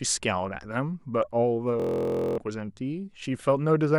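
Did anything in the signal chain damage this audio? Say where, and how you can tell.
Yes: Bluetooth stutter at the wireless link, from 1.80 to 2.38 s. The speech breaks into a rapid repeating buzz as the receiver replays its last buffer while packets go missing. It resumes 0.58 s further on, which fits a run of roughly two dozen lost packets.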